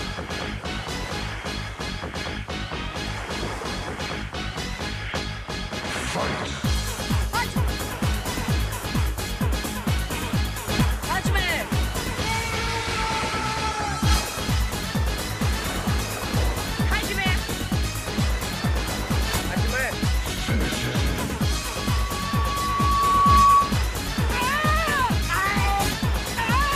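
From 21.49 s to 23.79 s a steady tone near 1.1 kHz swells over roughly two seconds into a piercing squeal about 10 dB above the surrounding sound. This is loudspeaker feedback squeal: the microphone re-captured its own loudspeaker, and loop gain above one at that frequency made the tone grow by itself.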